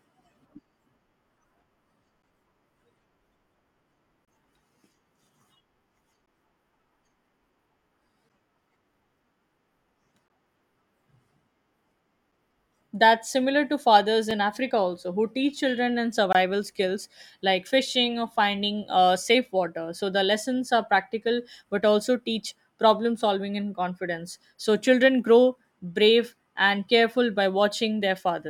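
Gaps between stream segments fall at 2.22, 4.25 to 4.28, 6.26, 8.29, 10.28, 14.31 (right after "that's similar to fathers") and 16.33 to 16.35 s (between "who teach children and" and "skills like fishing or"). Each is a hard-edged silent hole of about 4 to 25 ms, recurring near the 2-second segment boundaries. The segment timestamps don't quite meet, so the player inserts silence at each join, but no speech is lost.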